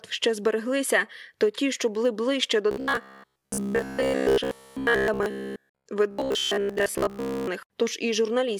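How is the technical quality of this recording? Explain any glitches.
The speech has two stretches of robotic buzzing. Robotic sound from repeated short buffers runs from 2.71 to 5.86 s, right after "що були ближче до", and again from 6.11 to 7.47 s. It likely comes from audio arriving too seldom, so a roughly 15 ms buffer is replayed in place of most of the real sound. That forces a rigid metallic buzz at 66.8 Hz.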